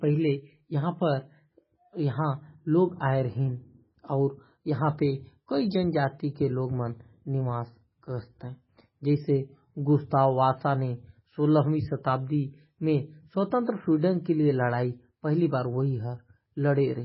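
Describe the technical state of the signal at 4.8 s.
At 4.8 s the speech carries the same heavy damage heard across the whole clip, likely MP3 compression at a very low bitrate, consistent with roughly 16 kbps. Starved of bits, the encoder discards everything above 5.5 kHz and drops weak frequency lines that flicker in and out between frames, giving a dull, watery, swirling sound with smeared consonants. A spectrogram shows a flat ceiling at 5.5 kHz and patchy, blinking holes beneath it.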